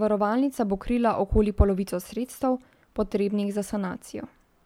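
No audible technical faults occur anywhere in this recording.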